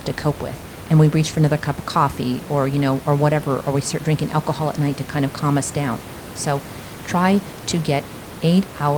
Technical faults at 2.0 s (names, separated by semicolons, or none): none